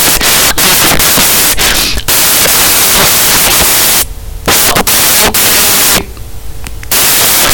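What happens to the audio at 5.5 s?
At 5.5 s, as throughout the clip, samples built from the wrong bytes turn the speech into loud noise close to white; unlike steady hiss, it follows the speech rather than sitting at a constant level.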